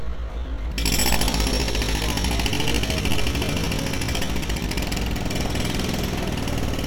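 A likely time-stretch in software slowed the opening of this sound recording to about 0.69 times its original pace while holding pitch, leaving a time-stretched section from 0.0 to 4.8 s that drags before the pace jumps back abruptly.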